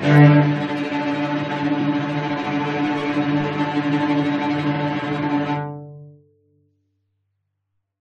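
Repeated frames at 1.8 s and 4.75 s: a short stretch of compressed audio is decoded twice in a row, causing a brief stutter. The first repeat adds 23.2 ms, fitting one frame; the second adds 46.4 ms, consistent with two frames replayed.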